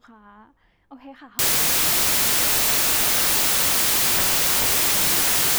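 From 1.39 s to the end, the speech collapses into loud, hissing noise, with the original still audible underneath but slowed to half speed and dropped about an octave. This is a wrong sample width fault. The sound points to 32-bit integer samples being read as 16-bit, so each real sample becomes two values. Only the upper halves carry the true signal. The lower halves turn into noise, and doubling the sample count halves the playback speed.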